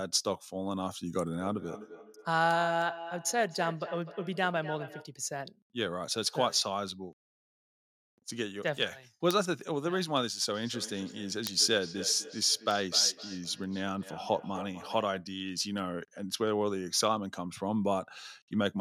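From 1.38 to 5.13 s the speech picks up a feedback echo between two devices. Each word returns roughly every 300 ms, at about 11 dB below the voice at its loudest. The repeats sound thinner and more ringing than the original. A second device in the room is replaying the call, and this microphone hears it again. Its echo canceller cannot remove sound it did not play itself. The same echo returns from 10.54 to 15.16 s, weaker at about 15 dB down.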